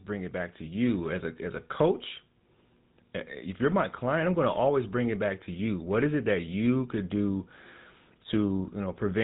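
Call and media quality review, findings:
GSM full-rate codec, throughout the speech. Buzzy, gravelly roughness plainly audible, nothing above about 3.8 kHz, consistent with a 13 kbps full-rate link. Excitation is coarse regular pulses on a vocal-tract model. Unlike plain narrowband filtering, which sounds muffled but smooth, this adds grit that is constant and never clears.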